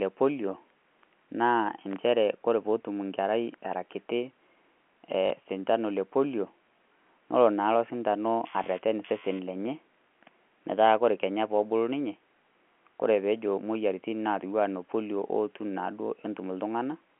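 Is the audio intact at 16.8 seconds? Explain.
Yes, the speech at 16.8 seconds comes through intact, with only the narrow band of the G.711 telephone line that runs through the whole clip.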